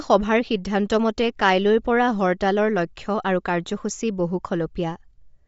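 Throughout the speech, the sound carries plainly audible codec damage consistent with Bluetooth LC3 compression, likely from an LE Audio link. Nothing reaches above about 7.7 kHz, and the upper band has a breathy, grainy texture where noise stands in for detail, which fits a rate near 32 kbps with 10 ms frames. On a spectrogram, energy stops at a flat ceiling near 7.7 kHz, with speckled noise filling the highest region below it.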